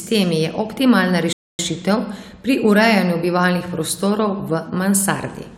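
At 1.33 s, just after "je optimalna", the speech drops to silence for about 260 ms, then resumes. This is a playback stall, likely from the player running short of data.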